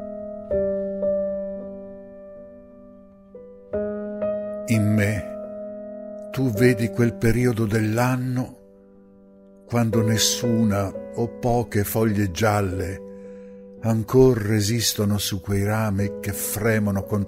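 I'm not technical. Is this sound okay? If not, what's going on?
Yes, it's fine; nothing here sounds wrong.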